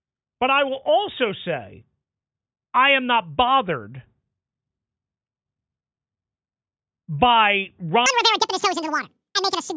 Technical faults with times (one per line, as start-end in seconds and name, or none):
8.06-9.76 wrong sample rate